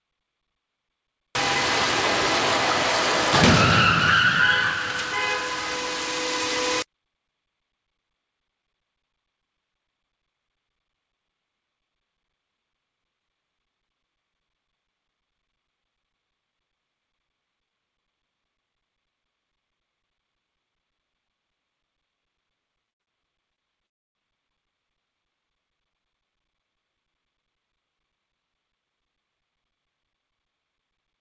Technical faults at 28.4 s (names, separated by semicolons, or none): jitter buffer speed-up